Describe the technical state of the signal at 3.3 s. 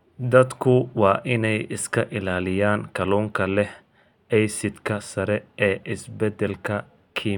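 At 3.3 s the signal is intact, with no dropout, distortion, glitch or other fault to be heard.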